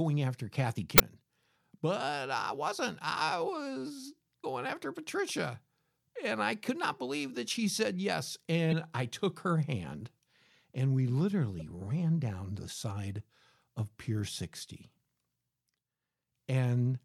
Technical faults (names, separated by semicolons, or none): damaged data in a compressed stream